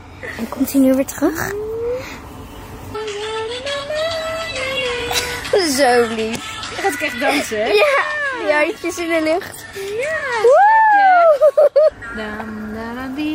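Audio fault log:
0.50–0.62 s, 4.96–5.02 s, 10.16–10.23 s: AAC frame loss with concealment. Each gap is about 43 ms, which fits a single missing frame. The decoder covers it by reusing the last good spectrum, so each spot sounds briefly smeared and noisy rather than silent. That smear distinguishes it from a plain dropout or mute, which would leave a clean hole. Because each loss is this short, the sound never decays into silence or fades back in.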